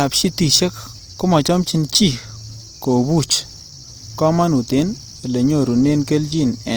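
Throughout the speech, the sound is rough and grainy, and clean tones turn noisy. The likely cause is Opus compression in its music mode, filling starved bands with folded or noise content. The damage is plainly audible, pointing to 24 kbps. Bandwidth stays full, to 20.2 kHz.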